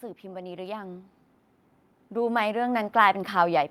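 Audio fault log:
0.21 to 1.15 s, automatic gain rising: the level creeps up by about 5 dB over roughly a second. The gain control judged the input too quiet and turned itself up. Speech and background noise swell together, so it sounds like a slow fade-up, not a louder talker.
2.10 to 3.22 s, automatic gain rising: the same slow lift of about 5 dB, over about 1.1 s. The background rises in step with the speech, which marks it as gain, not effort.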